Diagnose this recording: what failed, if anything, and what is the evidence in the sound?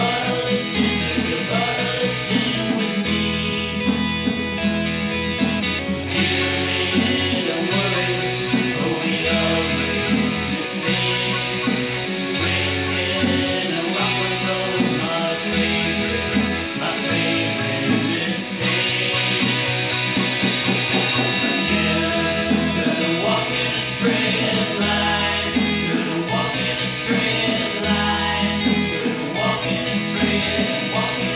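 Nothing in the signal points to a failure at any stage of the chain: level, timing and continuity hold steady throughout, with no disturbance a listener could tie to wiring, conversion, buffering, processing, transmission, storage or playback.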